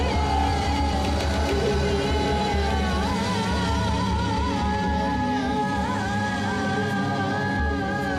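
No technical faults can be heard anywhere in the audio; the signal stays continuous and stable throughout, with no interruptions, level changes or added noise.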